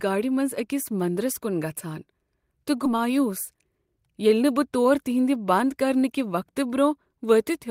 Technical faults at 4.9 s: jitter buffer speed-up

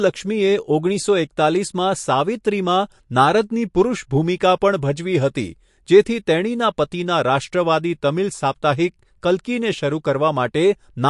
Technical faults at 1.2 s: MP3 compression

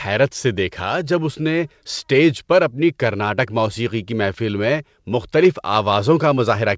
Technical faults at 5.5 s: none

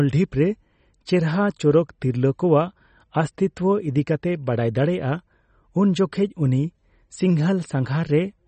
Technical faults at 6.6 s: MP3 compression

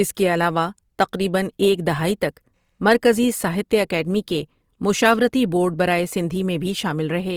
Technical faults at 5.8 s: Opus compression

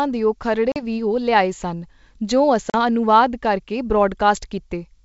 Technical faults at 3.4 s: none

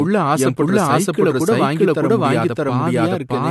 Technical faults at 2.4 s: doubled audio track; transcoding between lossy codecs

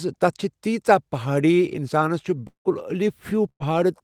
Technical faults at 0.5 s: none

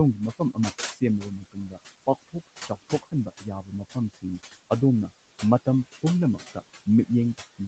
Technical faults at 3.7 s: noise suppressor artifacts; speech cut by the noise suppressor

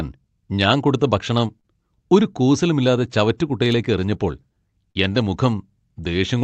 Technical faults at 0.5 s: clock drift between sender and receiver; repeated timing corrections

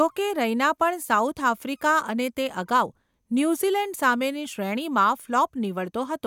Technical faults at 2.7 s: none

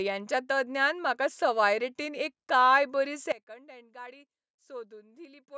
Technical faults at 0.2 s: none

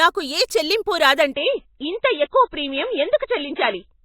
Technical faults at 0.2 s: none

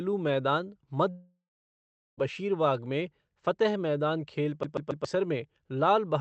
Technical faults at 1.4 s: long network dropout

